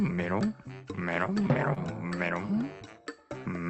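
Between 1.27 and 2.11 s, brief ticks and smeared hiccups appear. These are scattered short gaps: about five lost packets, none longer than roughly 20 ms, patched by extending the preceding sound.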